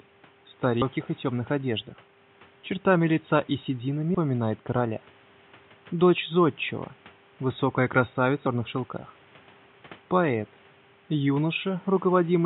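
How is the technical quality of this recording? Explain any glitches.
The recording has three skips from compressed frames skipped, at 0.82, 4.14 and 8.46 s. Whole frames are never decoded, so the audio jumps ahead roughly 400, 150 and 300 ms, which fits several 32 ms frames lost each time. On a waveform the envelope changes abruptly, and a spectrogram shows a sudden discontinuity in content.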